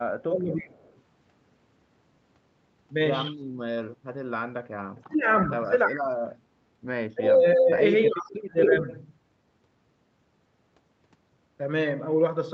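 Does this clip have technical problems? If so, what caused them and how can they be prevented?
Yes. The speech gets suppressed in double talk five times: 0.23 to 0.76 s, 4.94 to 5.27 s, 5.85 to 6.24 s, 7.15 to 7.72 s and 8.06 to 8.87 s. Each time the voice sinks by roughly 20 to 35 dB for a few hundred milliseconds. It was likely an echo canceller that heard both sides at once, couldn't tell the local talker from the loudspeaker echo, and ducked everything. A headset, or a canceller tuned for full-duplex, keeps that from happening.

There's echo leak as well. A faint scrap at 0.88 to 0.93 s sits about 40 dB down, delayed around 321 ms. A much stronger burst at 8.62 to 8.77 s comes back at roughly the same level as the speech, delayed about 269 ms, so it lands right over the tail of the last dip. The likely cause is a far-end speakerphone whose canceller let some of its mic pickup through and sent it back. 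Using headphones at that end, or turning its speaker down, would stop it.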